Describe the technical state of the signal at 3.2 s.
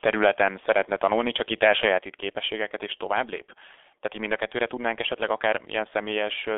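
At 3.2 s the speech passes through the G.723.1 codec for the whole clip, limited to 300 Hz–3.5 kHz at a rate fitting about 6 kbit/s, leaving it muffled, hoarse and smeared.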